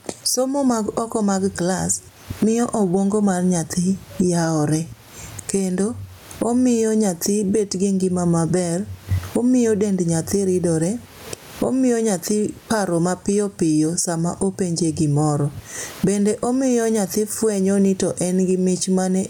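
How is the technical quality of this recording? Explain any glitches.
The recording suffers from one fault, gain pumping, which runs throughout the clip. The microphone gain is likely set far too high, so a fast limiter clamps down on every loud passage with swings of around 20 dB. The room noise, about 41 dB below the speech, is part of the recording rather than a fault, and the speech ends up squashed.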